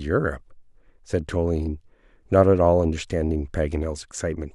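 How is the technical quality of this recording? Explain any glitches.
No glitches can be heard in this speech recording. There is nothing here that needs explaining.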